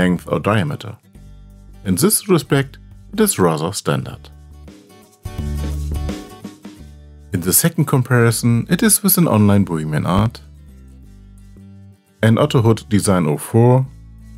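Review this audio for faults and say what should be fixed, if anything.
A loud pop lands at 10.18 to 10.29 s, a pair of sharp pulses about 10 dB above the sound. It is likely a voltage step from a plug, switch or static. Secure connections and avoid switching equipment while recording.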